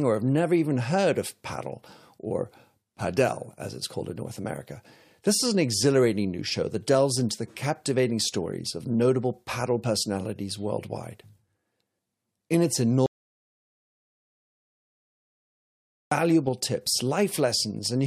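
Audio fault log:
13.06–16.11 s, audio dropout to silence. The speech stops mid-flow and about 3.05 s of silence follows, with no room tone underneath. The input was likely lost, and the recorder kept writing silence. Whatever was said in the gap is gone.
16.47 s, corrupt frame decoded. A short glitch lands just after the speech resumes. Damaged bits in what sounds like a couple of compressed frames were decoded anyway. Misread gains and codes pushed energy into the wrong frequencies for that instant.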